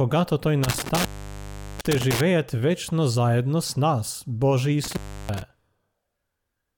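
Between 0.63 and 2.21 s, and again from 4.84 to 5.42 s, the speech crackles and drops out to faint hiss for about 0.74 s and 0.32 s: intermittent contact, a loose cable or plug briefly opening.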